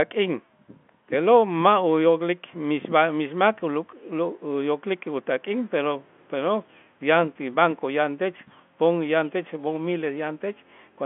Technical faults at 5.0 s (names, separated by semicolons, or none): none